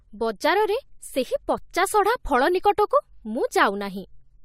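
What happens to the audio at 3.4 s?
Nothing goes wrong at 3.4 s; the speech carries on intact through that moment with no audible fault.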